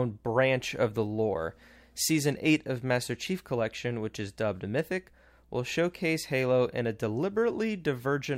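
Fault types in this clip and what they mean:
No faults detected in this speech recording; nothing on it calls for attention.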